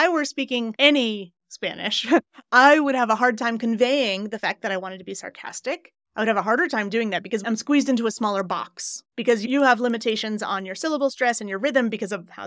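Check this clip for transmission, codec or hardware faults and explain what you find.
One fault is present, near the end. From 8.2 s, just after "I'm squeezed into a", to the end, the resampler restarts on every block. Each 100 ms block is converted alone during the 44.1 kHz to 16 kHz conversion. Block edges lack true neighbouring samples. Each edge ticks, giving a regular 10 Hz clicking under the speech.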